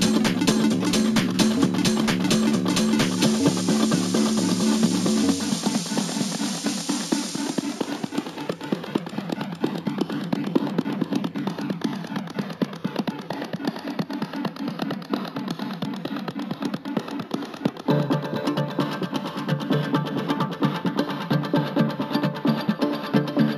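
Throughout, a dulled top end carries a faint metallic shimmer. This is imaging from linear upsampling: straight-line interpolation mirrors the spectrum into 8–16 kHz, which fits a 16 kHz-to-48 kHz conversion.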